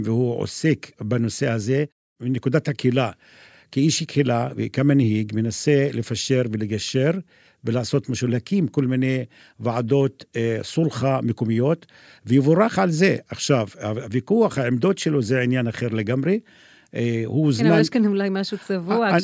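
No technical faults can be heard anywhere in the speech; the signal stays steady and intact throughout.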